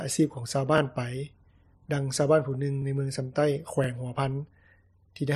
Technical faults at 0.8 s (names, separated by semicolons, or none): overlapping chunks